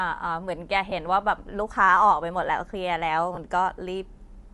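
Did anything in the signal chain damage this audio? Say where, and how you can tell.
Yes. At the codec stage there's plainly audible damage throughout the speech, a breathy, grainy top end, likely from Bluetooth LC3 compression noise-filling the upper spectrum, consistent with about 48 kbps.

Over the Bluetooth link there are lost LE Audio frames at 0.90 to 0.92 s and 3.35 to 3.38 s. Each brief noisy smear lasts about 20 ms, which fits two 10 ms frames concealed with the previous spectrum at randomised signs.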